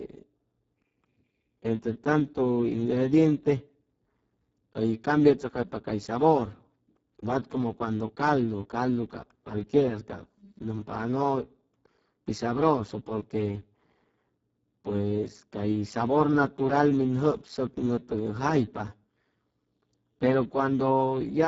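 From start to end the speech carries heavy Speex codec damage, with hoarse, noisy, near-robotic voicing that points to a very low bitrate around 6 kbps. The spectrogram shows smeared harmonics, noise-like fill in the upper band, and nothing above 7.7 kHz.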